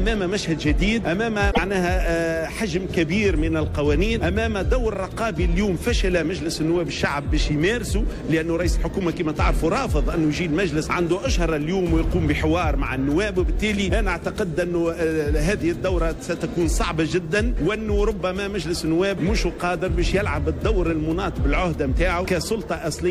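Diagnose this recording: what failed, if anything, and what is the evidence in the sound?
At 1.50 s the sound jumps forward, and the next 80 ms or so, up to 1.59 s, comes out corrupted before playback settles. The stage is the codec, and the likely cause is a broken MP3 bit reservoir: frames were lost at a cut, so the following frames reached back into the reservoir for borrowed bits and decoded another frame's bytes. The length of the corrupted span fits about three frames of 26.1 ms each.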